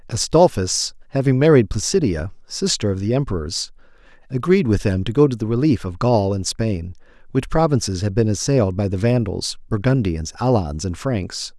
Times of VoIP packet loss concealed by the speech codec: none

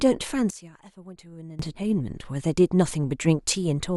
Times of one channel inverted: 0.50-1.59

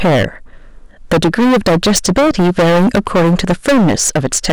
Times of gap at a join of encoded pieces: none

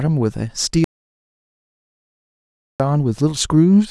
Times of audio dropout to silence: 0.84-2.80

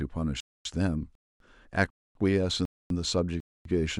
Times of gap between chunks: 0.40-0.65, 1.15-1.40, 1.90-2.15, 2.65-2.90, 3.40-3.65

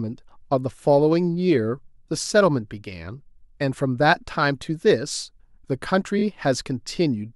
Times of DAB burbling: none

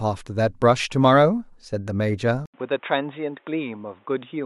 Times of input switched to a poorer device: 2.46-4.45

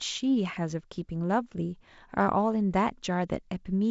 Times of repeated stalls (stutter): none

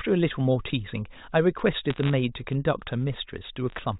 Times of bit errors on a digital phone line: 1.90-2.13, 3.70-3.79

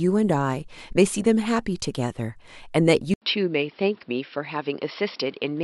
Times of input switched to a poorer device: 3.14-5.64

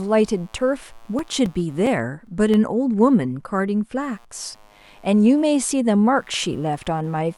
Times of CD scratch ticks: 0.92-2.54

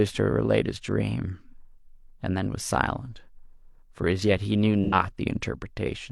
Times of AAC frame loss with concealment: 4.84-4.94

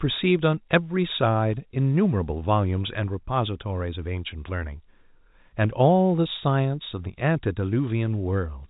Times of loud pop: none

